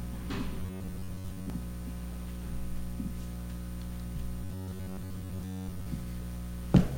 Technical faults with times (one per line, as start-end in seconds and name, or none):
0.60-1.50 robotic sound from repeated short buffers
4.44-5.86 robotic sound from repeated short buffers